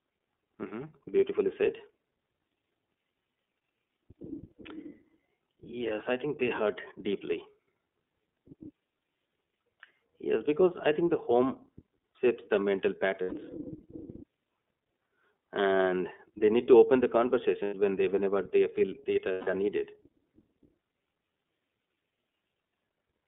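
Throughout, the speech passes through the iLBC codec. Nothing reaches below about 200 Hz or above 3.5 kHz, and there is a plainly rough, synthetic edge. Unlike a simple telephone band-limit, the grain comes from coarse coding of each frame's excitation, consistent with 30 ms frames at 13.33 kbps.

Lost iLBC frames occur at 13.23 s, after "home shapes the mental", for 90 ms. They recur at 17.64 s, between "need to open the" and "when they whenever they", again for 90 ms. The longest gap comes at 19.32 s, between "whenever they feel that" and "are needed", for 150 ms. The decoder repeats the last pitch cycle with noise, so each gap is a held, buzzy vowel rather than silence, and the voice is right again almost at once afterwards.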